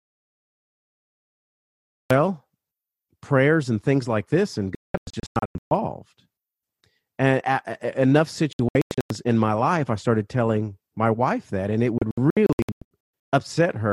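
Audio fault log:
0.00–2.11 s: audio dropout to silence. The clip opens already in it. There is total silence with no room tone until speech comes in at 2.11 s. The input was likely lost while the recorder kept writing silence, so nothing was captured.
1.30–1.97 s, 4.75–5.72 s, 8.53–9.11 s, 11.98–13.33 s: digital broadcast dropout. The receiver muted on bad frames. The first gap is one solid hole. The rest are clusters of short holes, the longest 192 ms. They come after "things like this and", after "and enough" with speech returning at "in my life i", and after "wife that and it".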